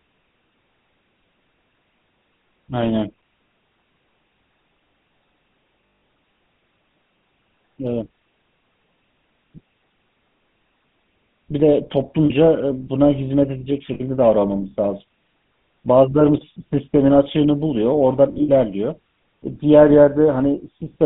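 Throughout, the speech carries the buzzy, gravelly roughness of the GSM full-rate codec, consistent with its 13 kbps coder. It rebuilds the voice from a vocal-tract model driven by sparse, regularly spaced pulses, so the grit sits in the voicing itself. A plain telephone line would only narrow the sound, and here the band runs from roughly 150 Hz to 3.6 kHz.

Lost GSM frames hit at 5.86–6.02 s (160 ms), 12.26 s (40 ms), 13.94–14.01 s (60 ms) and 18.32–18.49 s, where the losses are scattered over about 160 ms, the longest run around 70 ms. At each point the decoder repeats the settings of the last good frame, giving a brief metallic ring rather than the silent gap or click of a simple dropout.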